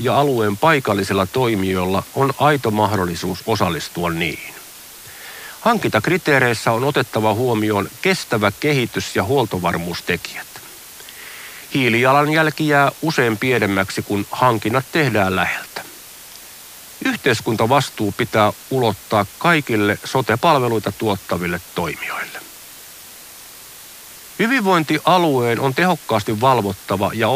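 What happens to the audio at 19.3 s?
Low bit depth with dither is present at 19.3 s, as it is across the whole clip. The speech is held at very coarse amplitude steps, which fits about 6 bits, and random dither noise is mixed in before each sample is rounded. The rounding error becomes a steady, even white hiss, roughly 20 dB below the speech, rather than gritty distortion. At this moment the hiss is flat and unchanging.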